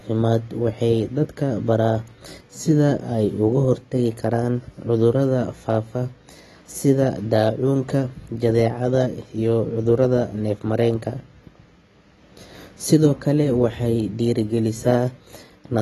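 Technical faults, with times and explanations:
Throughout, AAC compression: the speech has nothing above 12 kHz, and its sibilants sound smeared and warbling, unlike a clean low-pass. The likely cause is AAC-LC coarsely quantising each frame, consistent with a bitrate around 32 kbps.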